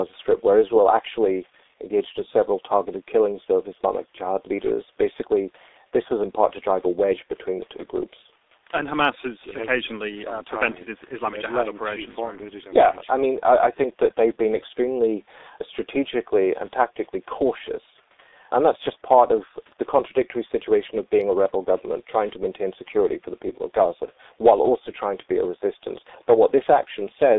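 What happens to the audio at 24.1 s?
VoIP packet loss concealed by the speech codec occurs from 24.05 to 24.12 s. About 30 ms of audio, which fits one lost frame, is rebuilt by the decoder from its last pitch and filter with falling gain. The gap becomes a brief buzzy tone or coloured noise that fades, and the sound stays weakened just after. Throughout, the G.723.1 codec keeps the audio muffled and hoarse, with nothing outside roughly 300 Hz to 3.7 kHz.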